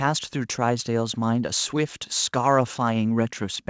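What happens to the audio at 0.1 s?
Nothing goes wrong at 0.1 s: the speech there comes through intact, carrying only the normal band limit of the call path, with nothing above 8 kHz.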